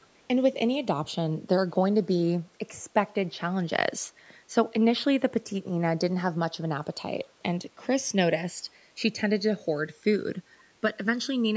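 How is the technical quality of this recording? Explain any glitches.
Two faults can be heard in the recording: a slow flanging that runs through the whole clip, and a very brief echo leak right at the start. The band stops at 8 kHz, which fits ordinary call microphone processing.

The channels drifting apart affect the entire clip. The two channels appear to be clocked independently, with a mismatch of around 100 ppm, so the offset between them keeps growing, reaching a bit under a millisecond by the end. Summed to mono, this produces comb-filter notches that glide steadily downward, heard as a slow, hollow flanging. On a spectrogram these notches show as evenly spaced dark bands drifting down over time.

The echo leak occurs from 0.01 to 0.07 s. It is a faint delayed copy of the sound, arriving about half a second (502 ms) after the original and sitting about 35 dB below it. This is likely residue that a loudspeaker-side echo canceller failed to remove and sent back into the call. 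On a spectrogram it appears as a weak, smeared replica of earlier energy. On the waveform it is a low-amplitude blip.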